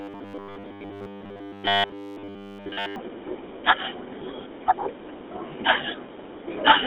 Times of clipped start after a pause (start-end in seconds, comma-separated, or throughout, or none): none